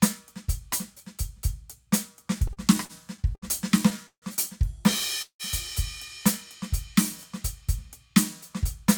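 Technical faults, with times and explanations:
2.47–3.45 s, repeated stalls (stutter): the music catches six times in under a second, with the longest hold about 68 ms and roughly 186 ms of filled-in sound in all, about a fifth of the span. Packets were arriving more slowly than playback, so the jitter buffer kept running dry and the receiver stretched the last sound each time. Nothing is lost, but the passage drags and hiccups. Many short catches in a row set it apart from a single freeze.
4.07–4.25 s and 5.22–5.42 s, call audio freeze: each time the music halts once and the last sound is held, then fades. The first hold fills about 150 ms, of which about 100 ms is silence. The second fills about 175 ms, with about 90 ms silent. The music then resumes exactly where it stopped, pushed later by the length of the hold, which points to packets that were likely held up in transit while the buffer emptied. 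One longer hold that fades into silence, rather than a rapid string of catches, marks these as freezes and not stutter.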